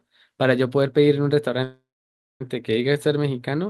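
At 1.63 s the speech halts and a call audio freeze runs until 2.42 s. The final sound is stretched into a buzzy tail that fades, followed by about 0.58 s of silence, and then the speech resumes exactly where it stopped. Nothing is lost, but everything after arrives about 0.77 s late. The likely cause is delayed packets draining the jitter buffer. On a spectrogram, smeared harmonic bands thin to a blank column. The waveform shows a decaying envelope, then a flat line.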